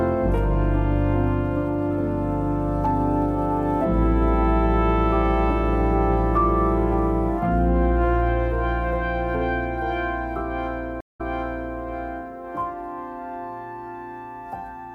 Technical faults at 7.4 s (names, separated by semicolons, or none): none